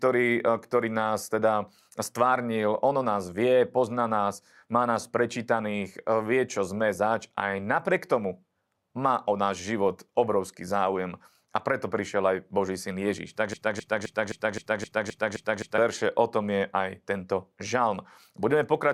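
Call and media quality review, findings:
Broken-record loop, 13.54–15.78 s. A 0.26 s fragment of speech repeats exactly, back to back, nine times. Likely cause: player, encoder or stream stalled and kept re-sending its last held buffer. The speech due in those 2.2 s never plays. Dropped, not delayed. Playback resumes after 15.78 s, picking up past the gap.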